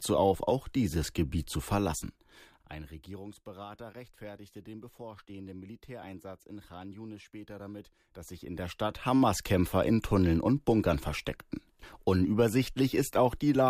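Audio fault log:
1.86–3.31 s, zipper noise: the level drops by about 20 dB in coarse steps instead of a smooth ramp, around 50 a second, so each jump leaves a tiny click and together they make a fine ticking buzz that rides on the speech.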